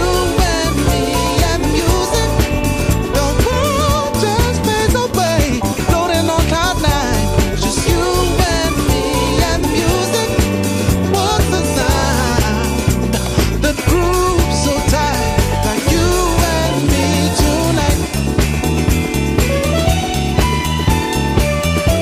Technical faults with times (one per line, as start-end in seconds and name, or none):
none